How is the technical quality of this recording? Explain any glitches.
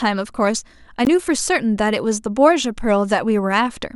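One glitch stands out: a block of digital silence at 1.05 s. For about 17 ms the audio drops out to silence, likely because the output buffer went unfilled in time. The hard cut in and out leaves a short hole, not a faded gap or smeared dropout.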